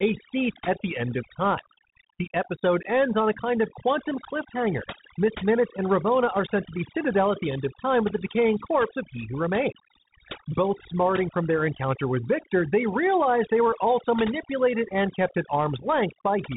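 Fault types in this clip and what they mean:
Overdone noise removal: A noise reduction stage was driven far too hard, so any frequency band sitting close to its idea of the background noise gets pushed down or shut off entirely, and the softer parts of the voice are caught along with it. The result here is a background that drops and breaks up into small twinkling specks, while the voice has its quieter detail stripped away.
Bluetooth CVSD headset codec: The voice has passed through the narrowband headset codec used on Bluetooth links, which tracks the waveform one bit at a time, stepping up or down with an adaptive step size, which fits a 64 kbps stream. Nothing above 3.8 kHz survives, so the voice sounds boxed in. The codec damage is plainly audible: loud high sounds outrun the step and distort, s sounds turn scratchy, and a granular hiss sits underneath.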